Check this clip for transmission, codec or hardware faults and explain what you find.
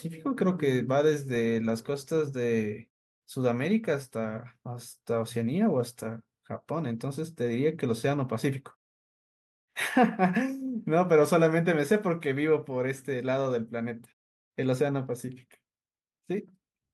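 I find no transmission, codec or hardware faults in this speech clip.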